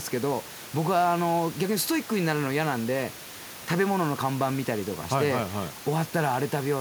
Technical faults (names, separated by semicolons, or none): none